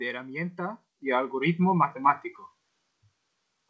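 At 1.02 s, just before "y algoritmos", the microphone volume is stepped up. The call software judged the input too quiet and raised the device gain in one jump, about 8 dB. Speech and background get louder together, abruptly, through a call path whose sound stops at 8 kHz.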